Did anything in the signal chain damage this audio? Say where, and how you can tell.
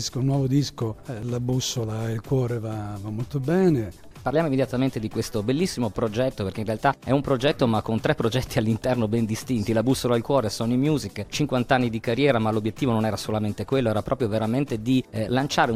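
Yes: at 1.23 s the sound jumps ahead, likely a dropped buffer (overrun) at the driver stage, where a few milliseconds were overwritten. No silent gap appears, which separates it from a dropout.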